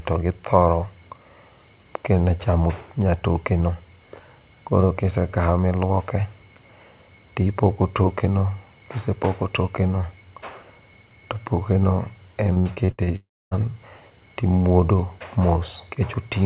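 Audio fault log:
12.53–13.10 s, repeated packet loss (robotic sound): Just after "to pokeno" the speech turns choppy. Six short holes open in quick succession, the longest about 66 ms, and each is bridged by stretching the last bit of sound, so around 240 ms of the half-second span is patched rather than real. Unlike a single dropout, the audio keeps resurfacing between gaps, which gives the broken, choppy cadence.
13.16–13.54 s, long network dropout: Right after the choppy run, the sound stops arriving altogether for roughly 0.36 s. The last fragment is extended into a fading buzz or hiss, then about 0.27 s of near silence follows before speech resumes, with the missing stretch simply gone. What separates it from the packet loss before it is the single unbroken hole that decays to quiet rather than flickering. The likely cause is a network interruption on this narrowband call path, which has nothing above 4 kHz, consistent with G.711 at 64 kbps.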